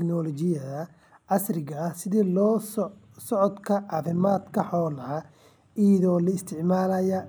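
From 3.88 to 4.70 s the speech carries overlap-add ripple: frames were windowed and rejoined with an overlap that fails to sum to constant gain, so level swings by about 6 dB once per frame, around 40 times a second, giving a rough flutter.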